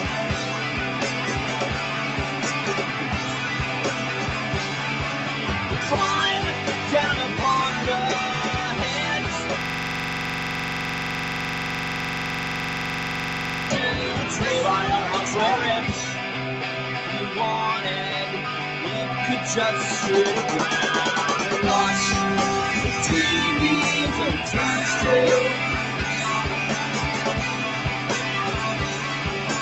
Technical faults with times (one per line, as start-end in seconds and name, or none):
0.00-29.61 noise suppressor applied to music or sounds
9.61-13.70 system hang loop